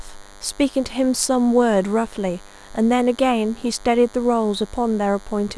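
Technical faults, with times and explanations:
Throughout, DECT cordless phone buzz: there's a thin, steady buzz sitting under the speech the whole way, roughly 25 dB down. A DECT handset or base nearby fires a short radio burst every 10 ms, and something in the audio chain rectifies those bursts into a 100 Hz pulse train. Because the pulses are sharp, you get a stack of harmonics on top of the 100 Hz fundamental, which is why it sounds raspy rather than like a smooth hum.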